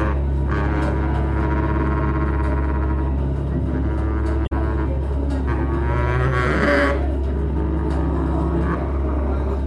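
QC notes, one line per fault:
4.43 to 4.52 s, damaged data in a compressed stream: for about 94 ms the decoder meets corrupted bytes, misreads or drops those frames and loses sync until it finds the next valid frame header, so the audio there is broken off or garbled.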